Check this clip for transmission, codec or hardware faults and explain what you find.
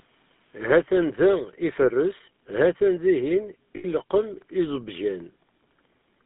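Two faults are present: GSM full-rate coding across the whole clip, and a burst of lost GSM frames.

Throughout, the GSM full-rate codec gives the speech a plainly audible buzzy, gravelly roughness, consistent with a 13 kbps stream. It models the vocal tract and rebuilds the excitation from sparse, regularly spaced pulses. A spectrogram shows energy confined to 200 Hz–3.6 kHz, with blank space above.

From 3.76 to 3.85 s, lost GSM frames leave an 80 ms gap, which fits four 20 ms frames. The decoder repeats the last good frame's settings, producing a rough, metallic ring. The waveform shows a repetitive segment there; the spectrogram shows smeared, static bands.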